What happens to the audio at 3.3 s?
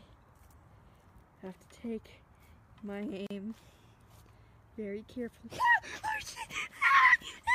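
At 3.27 to 3.31 s there is a gap at a join of encoded pieces: a 39 ms gap where separately encoded sections were butted together untrimmed, leaving encoder delay and end padding. It sounds like a brief dropout, and waveform and spectrogram show a thin, smeared blank column.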